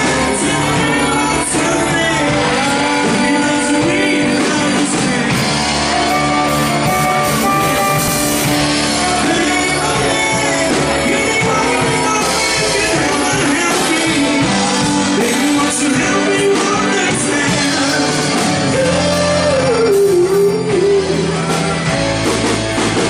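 At 8.08 s and again at 18.18 s, a 100 ms slice of sound plays twice, the mark of overlapping chunks: each 10 s block begins before the previous one ended. Unlike a dropout, nothing goes missing; the sound stutters backward, with regular spacing.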